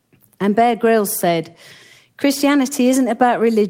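No technical faults can be heard anywhere in the speech.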